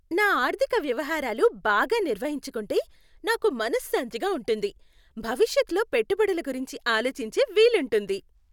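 No audible technical faults.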